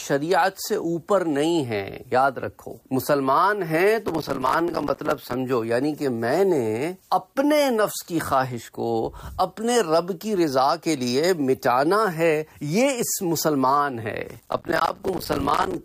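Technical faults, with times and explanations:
4.08–5.34 s, processor overload crackle: a gritty burst of crackle riding on the sound for over a second. The processor can't finish its tiny buffers on time, and each miss drops in a hard-edged sliver of silence. It fits buffers of around 5 ms, with dozens missed over the stretch.
14.29–15.74 s, processor overload crackle again: a longer, denser tear, closer to a hundred missed buffers, with the same silent gaps chopping the sound until the load lets up.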